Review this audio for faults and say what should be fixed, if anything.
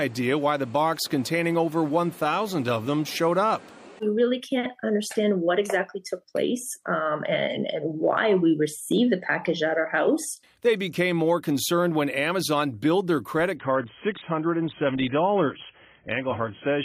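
An adaptive stream at a lower bitrate takes over from 13.56 s to the end at 16.84 s. The switch is abrupt and gapless: the treble vanishes, with nothing above 3.8 kHz, and the sound turns thin and smeared with codec artefacts. This points to the player dropping from an AAC-LC rendition near 96 kbit/s to one near 16 kbit/s when the connection slowed. To prevent it, fetch the whole asset at the top rendition, or give the player enough buffer headroom that it doesn't downshift before the clip finishes.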